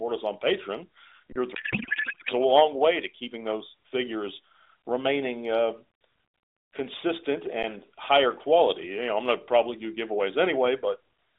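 At 1.32 to 1.36 s the sound briefly freezes flat for about 32 ms, then picks up where it left off. This is an underrun with held sample: the output buffer ran dry and the converter held its last value.

From 1.55 to 2.33 s the speech turns into garbled, warbling noise that barely tracks it. This is a codec payload misread: octet-aligned AMR frames were decoded as bandwidth-efficient, so the fields landed in the wrong places.

At 7.63 s a second, shorter hold of about 11 ms, or 512 samples, flattens the waveform. This is again an underrun with held sample, and playback resumes where it left off.

Throughout, the AMR narrowband codec limits the speech to roughly a 300 to 3700 Hz telephone band.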